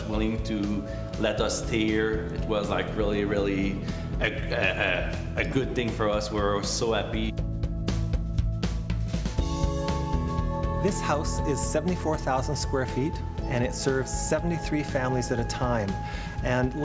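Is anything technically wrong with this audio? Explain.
No, nothing technically wrong stands out here; the audio sounds fine all the way along, with no glitches or problems to point to.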